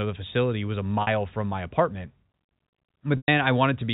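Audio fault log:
1.02–1.07 s and 3.17–3.28 s: packet loss with pitch repetition. Between "the facility was a" and "from my apartment", a 50 ms hole is patched by looping the last pitch period, giving a brief held buzz. The 110 ms loss outlasts that loop, fades to silence, then cross-fades back.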